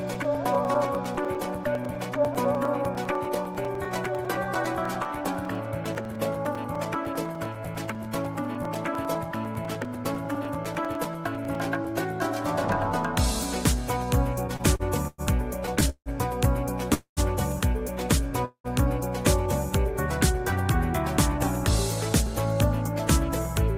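From 0.15 to 11.85 s, periodic USB or driver dropouts put a tiny silent hole, around 4 ms, into the sound every 0.1 s, about a hundred in all. The result is a steady ten-per-second ticking that rides only on the signal. Unlike network stalls, these gaps are too short and too evenly spaced to stretch the timing.

Repeated stalls (stutter) follow. Between 14.47 and 15.21 s there are four gaps, the longest 109 ms, filling about a quarter of that span. Between 15.66 and 16.09 s there are four more, the longest 163 ms, filling nearly half. Each time the last sound is held and then resumes. Nothing is lost, but the audio drags and hiccups irregularly.

Two single call audio freezes come next, most likely from packets held up in transit. The first runs from 16.94 to 17.20 s and lasts 229 ms. The second runs from 18.45 to 18.67 s and lasts 194 ms. Each holds the last sound, which fades to silence for roughly the final 110 ms and 90 ms respectively, and then continues where it stopped. 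One isolated pause, rather than a cluster, sets a freeze apart from stutter.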